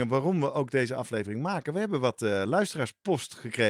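A speech clip with no audible technical faults.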